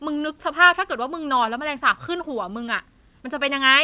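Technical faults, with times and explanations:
Throughout: clock drift between sender and receiver. The sending side's clock runs fast by around 4 percent relative to the receiver, so audio arrives slightly quicker than it is played out and the jitter buffer keeps filling up. The receiver must discard small slices of the speech to hold latency steady. The result is a faint, persistent unevenness in pacing rather than a single audible event, and it is heard through a narrowband path with nothing above 4 kHz, consistent with G.711 A-law.
0.08–3.80 s: repeated timing corrections. Across this stretch the receiver trims short pieces of the speech to keep pace with a sender running at 104 percent. Every correction goes the same way, removing material rather than repeating it, and they fall at uneven intervals. Each cut is small, so the speech does not break up. Instead the rhythm sounds slightly irregular, with occasional tiny hiccups where a fragment has been dropped to keep the buffer from overfilling.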